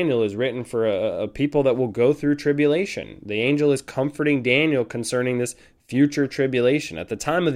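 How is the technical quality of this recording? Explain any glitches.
The technical quality of this recording holds up, with no glitches to explain.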